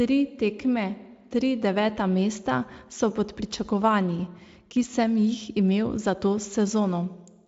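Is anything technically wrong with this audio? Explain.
No, the speech comes through a Speex codec at a high setting of 34 kbps with little or no audible coding damage, and the band ends near 7.6 kHz as that codec's wideband mode would have it.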